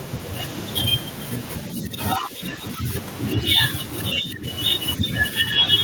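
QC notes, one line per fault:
1.73–1.99 s, speech suppressed in double talk: the echo canceller likely mistook the talker for loudspeaker echo while both sides spoke and pulled the level down, so the speech dips by about 10 dB for roughly a third of a second.
2.18–2.89 s, speech suppressed in double talk: a milder case, likely the same confusion, with the level dropping by only about 5 dB over a few hundred milliseconds, heard as a soft sag.
4.14–4.46 s, speech suppressed in double talk: the deepest cut, likely from the canceller clamping hard, with the speech falling by about 15 dB for about a third of a second.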